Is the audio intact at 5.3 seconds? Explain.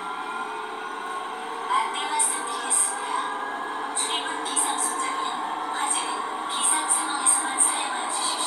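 Yes, the audio is intact at 5.3 seconds, with no dropout, click, distortion or other fault at that moment.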